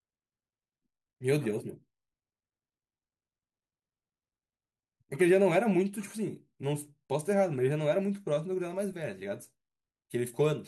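No technical faults can be heard anywhere in the speech, with the signal remaining continuous and stable throughout.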